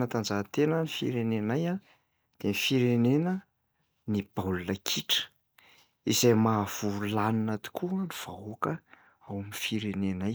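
No technical faults can be heard anywhere in this speech recording.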